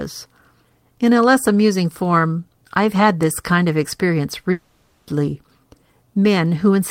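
A long network dropout hits this speech clip from 4.51 to 5.09 s. For about 0.56 s the speech stops and the last sound is drawn out into a buzzy, hissy continuation that fills the whole gap rather than falling to silence. The likely cause is a run of audio that never reached the receiver, which kept extending what it last had. When the speech resumes, the lost portion is simply missing.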